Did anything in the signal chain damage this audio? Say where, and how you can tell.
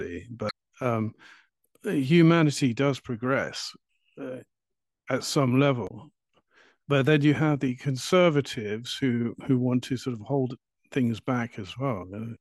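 Yes. Two brief glitches cut through the speech, from 0.47 to 0.51 s and from 5.85 to 5.91 s. This is damaged data in a compressed stream at the codec stage: corrupted bytes made the decoder misread frames, lose sync, then lock onto the next valid header.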